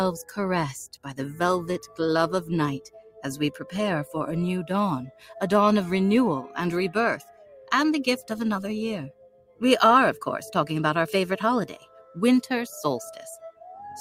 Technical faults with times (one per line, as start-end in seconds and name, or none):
0.00-14.00 noise suppressor applied to music or sounds
1.82-1.99 sound cut by the noise suppressor
2.79-3.24 sound cut by the noise suppressor
3.58-3.73 sound cut by the noise suppressor
5.09-5.39 sound cut by the noise suppressor
7.17-7.71 sound cut by the noise suppressor
9.09-9.62 sound cut by the noise suppressor
11.71-12.17 sound cut by the noise suppressor
13.52-13.67 sound cut by the noise suppressor